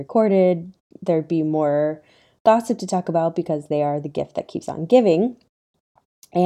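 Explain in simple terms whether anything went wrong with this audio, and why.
Nothing went wrong with this recording of speech; no technical fault can be heard anywhere in it. The sound carries on steadily without any break or interruption.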